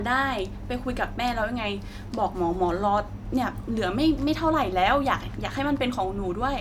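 No technical faults are audible in this speech recording.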